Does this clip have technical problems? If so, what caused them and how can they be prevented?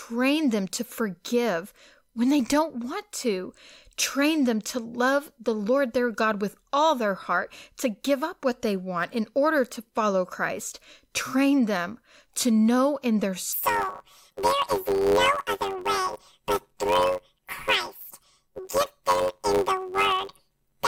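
Yes. From 13.53 s, right after "to know in their", to the end at 20.87 s, the speech is planar audio read as interleaved. Each 10.67 ms block, which fits a 512-sample buffer, plays left then right at double speed. This gives a robotic buzz at about 93.8 Hz. Unlike a sample-rate error, there is no octave shift, and the pace stays normal. Prevent it by checking the channel layout flag and deinterleaving or converting planar buffers before playback.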